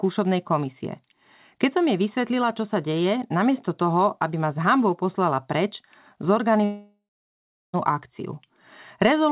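Long network dropout, from 6.64 to 7.75 s in this speech clip, heard over a narrowband call path with nothing above 4 kHz: about 1.1 s of audio was likely lost in transit. The receiver drags the last sound into a fading buzz or hiss, then about 0.73 s of silence follows before the speech returns with the missing stretch gone.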